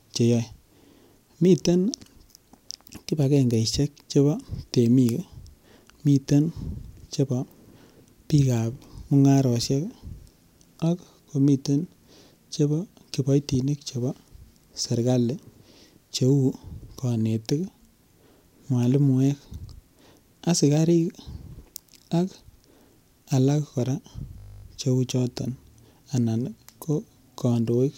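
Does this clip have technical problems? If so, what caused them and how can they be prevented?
Yes. A system hang loop occurs from 24.38 to 24.64 s, right after "alak kora" and before "cheu choton". The computer or driver stalled briefly, and the sound hardware kept replaying its ring buffer. A 20 ms slice repeats 13 times. That produces a steady 50 Hz buzz, which fits a buffer of about 20 ms. Almost no audio goes missing. To prevent it, give the audio thread real-time priority and use stable drivers.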